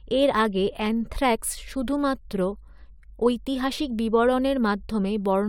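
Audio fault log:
No faults are heard in the speech. Nothing in it calls for a timed entry.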